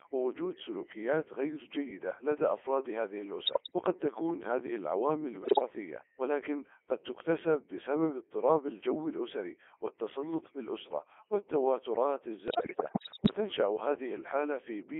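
From start to end, the speech is carried by a Codec 2 vocoder. The sound points to its highest mode, 3.2 kbit/s. The band runs from 300 Hz to 3.5 kHz. Only pitch, voicing, level and a rough spectral shape survive the link. The decoder rebuilds each frame from sine waves. The original waveform is gone. The result is heavily damaged, robotic and buzzy.

Bit errors on digital voice radio strike three times: 3.46 to 3.76 s, 5.42 to 5.68 s, and 12.48 to 13.34 s. The first and last bursts corrupt several percent of the bits. The middle one reaches about one bit in ten. At this low rate, each flipped bit can reset a whole frame's pitch, level or voicing. The voice lurches in pitch and loudness. It breaks into bleeps and warbles. The last burst is the longest.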